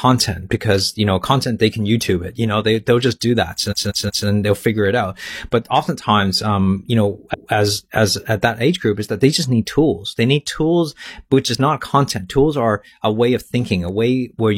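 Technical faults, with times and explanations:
3.67–4.23 s and 7.29–7.48 s, repeated frames: a 185.8 ms chunk, which fits four compressed frames, replays three extra times after "they'll just do that", then once after "oftentimes um you know". You hear a stutter, and the clip gets longer by about 0.56 s and 0.19 s.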